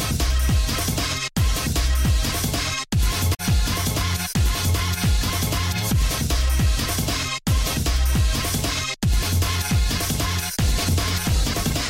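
A brief glitch cuts through the sound from 3.33 to 3.40 s, lasting about 70 ms. This is damaged data in a compressed stream: corrupted bytes leave the decoder misreading frames and losing sync until it locates the next valid frame header.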